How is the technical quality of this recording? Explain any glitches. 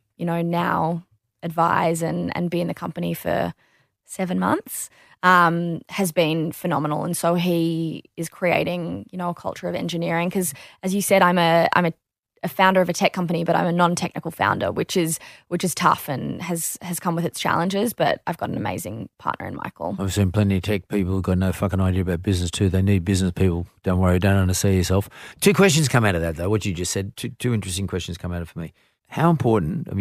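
No glitches or technical faults can be heard anywhere.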